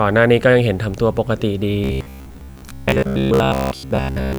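From 1.84 s to the end of the speech, the sound turns into a rigid, metallic buzz. This is robotic sound from repeated short buffers. The buzz sits at about 67 Hz, which fits a buffer of roughly 15 ms. The likely cause is new audio arriving too seldom, so the same short stretch gets replayed to fill the gap. Most of the time, around two thirds or more, is covered by these repeats. The sound still loosely follows the speech underneath.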